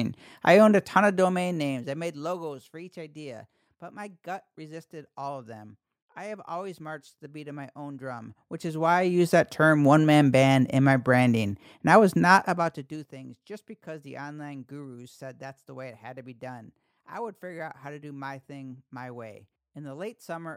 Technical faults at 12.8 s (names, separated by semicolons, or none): zipper noise